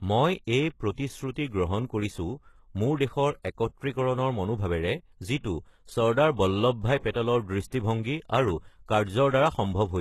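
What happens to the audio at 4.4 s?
At 4.4 s the speech carries the HE-AAC compression damage heard across the whole clip, likely from HE-AAC at a low bitrate, with the sound pointing to around 16 kbps. Only the lower band is coded properly. The treble is rebuilt by copying lower bands upward under a coarse envelope, so its harmonics fail to line up across the crossover. The s sounds come out gritty and lispy, the damage is plainly audible, and nothing is present above 12.3 kHz.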